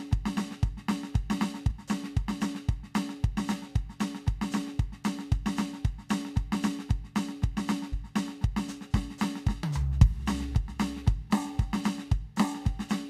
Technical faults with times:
1.70-1.72 damaged data in a compressed stream
7.92 damaged data in a compressed stream

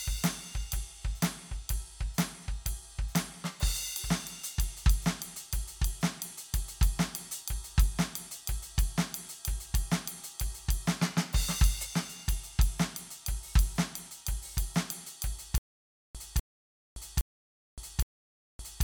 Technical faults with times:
15.58-18.84 stutter with silent gaps

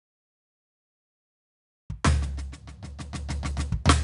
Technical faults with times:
0.00-4.03 4-bit ADPCM compression
2.52 audio missing between chunks
3.51 audio missing between chunks

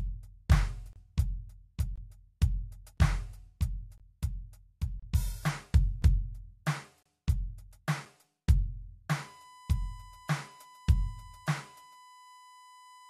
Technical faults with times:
0.93-0.96 gap between stream segments
1.96 gap between stream segments
2.97 gap between stream segments
3.98-4.00 gap between stream segments
5.00-5.03 gap between stream segments
6.02 gap between stream segments
7.03-7.06 gap between stream segments
9.20-13.09 USB whine

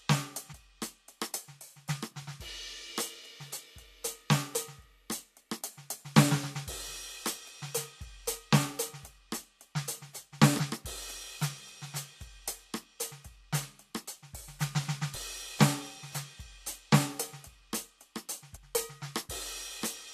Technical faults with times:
0.51 damaged data in a compressed stream
10.59 damaged data in a compressed stream
15.14 damaged data in a compressed stream
18.55 damaged data in a compressed stream

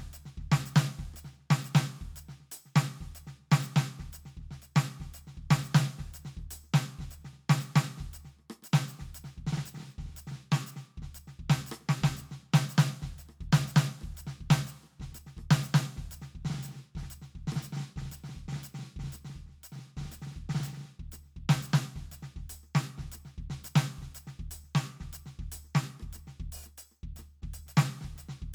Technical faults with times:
none

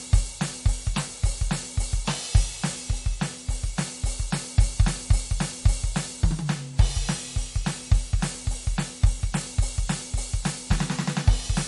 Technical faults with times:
0.00-11.67 MP3 compression

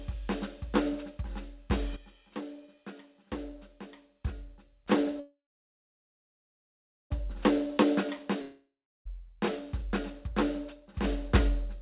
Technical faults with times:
1.96-4.86 sudden gain jump
5.20-7.12 call audio freeze
8.42-9.07 long network dropout
11.04-11.81 sudden gain jump

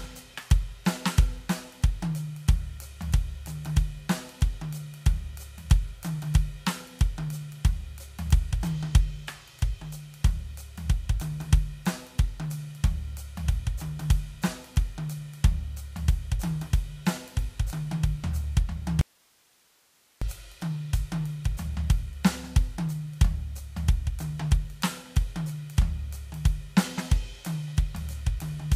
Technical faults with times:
19.01-20.22 audio dropout to a faint residue

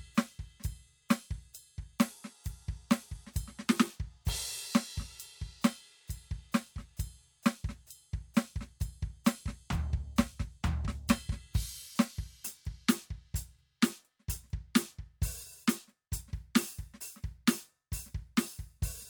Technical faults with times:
none

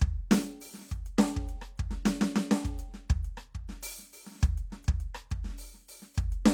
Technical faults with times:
none

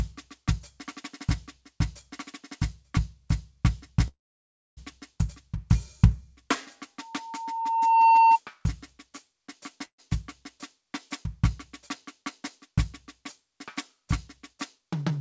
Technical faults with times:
4.08-4.79 call audio freeze
6.99-8.39 loudspeaker feedback squeal
9.85-10.00 call audio freeze
14.53-15.18 jitter buffer speed-up

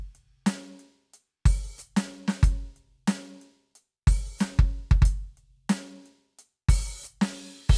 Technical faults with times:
none

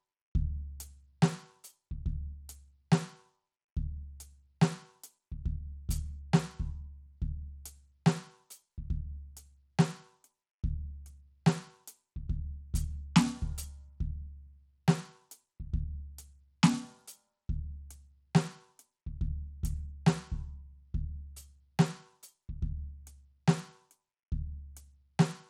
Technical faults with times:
0.00-25.49 Bluetooth SBC compression

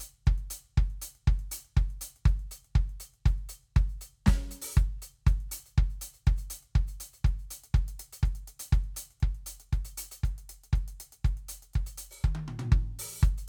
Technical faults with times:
none

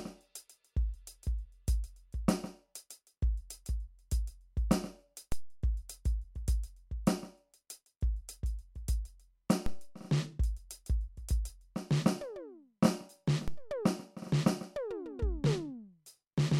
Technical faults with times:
5.32 DC step
9.66 DC step
13.48 DC step

